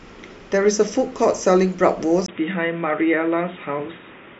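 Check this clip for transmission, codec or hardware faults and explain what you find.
One fault is present. At 2.26 s a 20 ms gap precedes dull, boxy speech with nothing above 3.8 kHz and faint new background noise. This is likely an input switched to a poorer device. A spectrogram shows the top band suddenly empty.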